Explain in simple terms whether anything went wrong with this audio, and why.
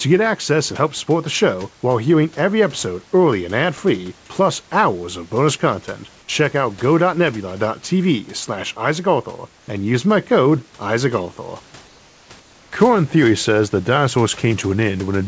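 From 11.88 to 12.30 s and again from 12.40 to 12.72 s, the real room background in the pauses of this speech gives way to a smooth, featureless hiss, slightly quieter. This is comfort noise in place of the background, likely from the call system filling gaps with made-up noise. Unlike a dropout, the pause never goes fully silent.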